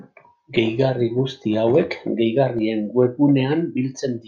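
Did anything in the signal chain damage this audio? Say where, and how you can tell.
Yes. A block of digital silence at 2.59 s in the speech points to the driver or buffer stage. The samples drop to zero for about 1.3 ms and return with no fade, leaving a tick. The length fits a 64-sample buffer that went unfilled.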